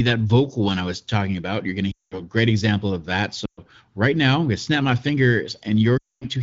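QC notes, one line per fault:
1.91–2.19 s, lost AMR speech frames: radio errors corrupted about 200 ms of frames, which fits a run of ten 20 ms frames. The wideband decoder repeats its last good settings with falling gain, so the speech drops to near silence within two frames.
3.45–3.60 s, lost AMR speech frames: a shorter 120 ms loss, about six frames. The sound drops to near silence within two frames, and the speech returns weak or rough for a moment.
5.97–6.26 s, lost AMR speech frames: the longest gap, 240 ms. Concealment drops the sound to near silence within two frames, and the speech resumes weak or rough.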